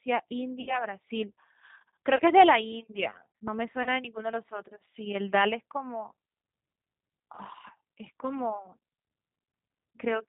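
G.729 codec throughout this speech clip: the audio is band-limited to below 4 kHz and has the slightly rough, synthetic edge that comes from rebuilding speech from a vocal tract filter, a pitch predictor and a few pulses per subframe, which fits G.729A at 8 kbit/s. The damage is plainly audible. VoIP packet loss concealed by the speech codec occurs at 0.61 to 0.85 s, 2.16 to 2.21 s, 3.83 to 3.89 s and 7.35 to 7.42 s. The first gap covers about 60 ms of lost audio, which fits two lost packets, and the later ones about 30 ms each. In each gap the decoder stretches its last pitch and filter into a buzzy tone or coloured noise that fades. Because each frame builds on the one before, the speech stays weak or smeared for a short stretch after it resumes.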